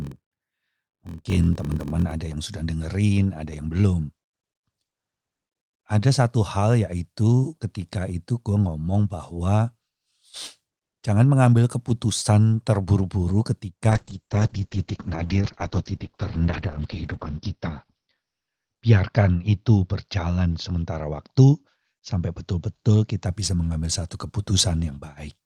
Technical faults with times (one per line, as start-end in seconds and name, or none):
0.00-2.13 block size mismatch (padded)
13.90-23.31 call bitrate drop